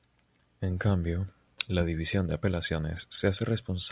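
No technical faults can be heard anywhere in the speech.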